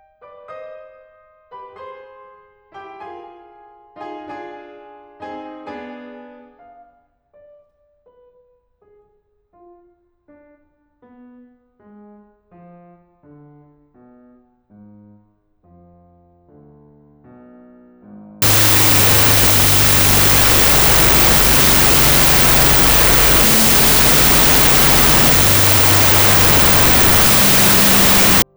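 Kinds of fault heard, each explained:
wrong sample width: loud noise buries the music at half speed, an octave low, fitting 32-bit float read as 16-bit; a byte-order error keeps speed.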